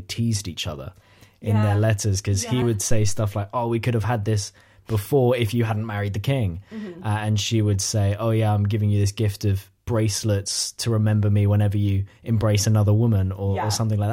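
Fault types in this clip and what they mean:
Phantom power thump: a supply step through the coupling capacitors gives a deep thump at 2.91–3.30 s, decaying within 89 ms, a broad low-frequency waveform swing.
Dropped buffer (overrun): a jump at 4.04 s, likely about 10 ms skipped and spliced; a thin vertical spectrogram line, a waveform discontinuity.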